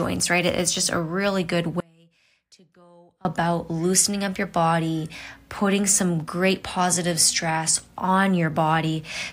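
Speech cuts out abruptly at 1.80 s and returns at 3.25 s, leaving about 1.4 s holding only a faint trace, roughly 30 dB below normal level. This audio dropout to a faint residue likely came from losing the wanted signal while the path after the break stayed live.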